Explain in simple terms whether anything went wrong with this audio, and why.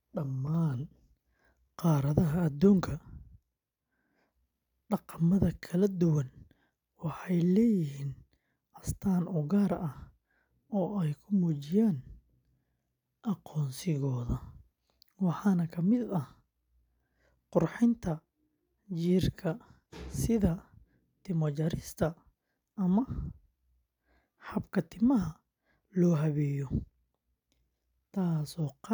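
Nothing went wrong here: the recording reaches the listener as steady, continuous speech, with no breaks, distortion or other technical trouble to point to.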